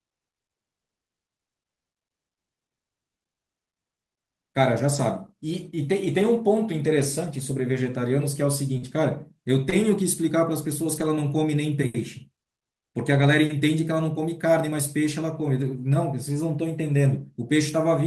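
Packet loss rebuilt from error correction first appears at 4.89–4.99 s and recurs at 6.99–7.05 s, 8.81–8.87 s, 9.72–9.74 s, 10.96–11.10 s, 13.14–13.24 s and 15.62–15.68 s. In each case the speech lost packets, but the following packet carried a reduced-bitrate duplicate that the decoder played instead. There is no audible gap. These stretches, roughly 20 to 80 ms of rebuilt audio each, come through coarser and grainier than the surrounding speech.

Short concealed packet loss occurs twice: 8.77–8.83 s, running into the error-corrected stretch there, and 9.69–9.74 s. Here about 40 ms and 20 ms of audio never arrived in time, and no backup copy was available for those parts. The receiver extrapolated from the preceding sound, continuing its pitch or shaped noise, then crossfaded back to the real signal. Each event is heard as a brief smear or wobble.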